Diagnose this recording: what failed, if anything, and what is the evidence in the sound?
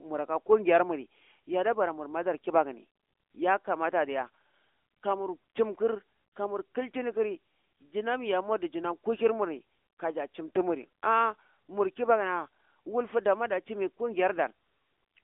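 The codec stage failed: the speech went through the AMR narrowband mobile codec (AMR-NB) for the entire clip. The band runs from 250 Hz to 3.6 kHz, with nothing above 3.7 kHz. Sparse pulse-driven vocal-tract modelling adds a plainly audible buzzy, synthetic edge, which fits a mode near 10.2 kbps.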